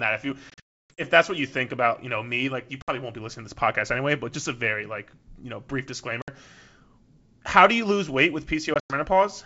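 Packet loss on an ADPCM call cuts hard-edged silent holes after "that if you" (0.50–1.02 s, about 400 ms lost, longest run 300 ms), at 2.82–2.90 s, after "like you know brief" (6.22–6.29 s), and after "do you lose weight" (8.74–8.94 s). Unlike smoothed concealment, each gap is followed by brief, slight distortion as the predictor resynchronises.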